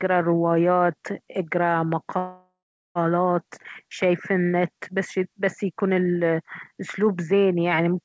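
At 2.18 s the speech stops and a call audio freeze runs until 2.98 s. Likely, delayed packets emptied the jitter buffer. The last sound is stretched into a fading buzz, then about 0.42 s of silence. Speech resumes where it stopped, nothing lost, now 0.77 s late.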